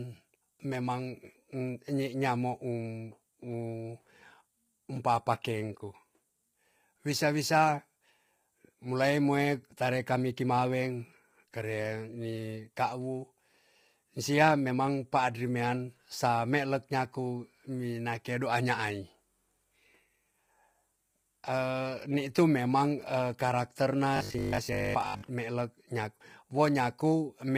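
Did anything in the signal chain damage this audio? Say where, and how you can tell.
Yes. Throughout the speech there is a rough, grainy texture, with noise filling the gaps between harmonics and a thin, synthetic-sounding top band. This is likely heavy low-delay AAC compression at a low bitrate, fitting AAC-ELD near 24 kbps. Unlike network dropouts, it never comes and goes.

From 24.17 to 25.31 s, between "karakter na" and "melek nyak", the speech turns into a rigid metallic buzz at 50 Hz that still loosely tracks the syllables. This is robotic sound from repeated short buffers, which likely happens in the driver or buffer stage. Roughly most of that stretch is repeats of a 20 ms block. Mains hum would not follow the syllables.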